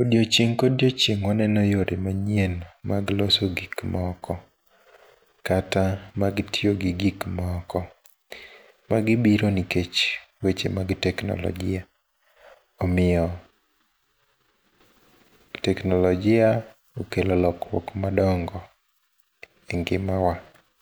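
No technical faults are audible.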